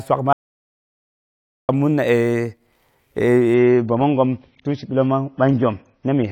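Speech clip with an audio dropout to silence from 0.33 to 1.69 s: about 1.36 s of silence, no room tone, unlike a fade or gate, likely from lost input. From 3.54 s to the end, an adaptive stream at a lower bitrate: without any gap, the treble stops abruptly at 6.5 kHz and artefacts rise, which fits a drop from roughly 96 to 24 kbit/s AAC.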